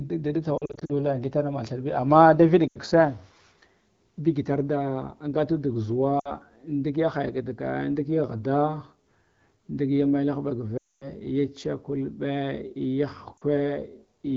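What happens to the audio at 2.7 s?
The speech drops to near silence within two frames from 2.68 to 2.78 s. These are lost AMR speech frames: roughly 80 ms arrived corrupted, which fits four 20 ms frames, and the AMR-WB decoder reused the last good pitch and vocal tract settings with falling gain.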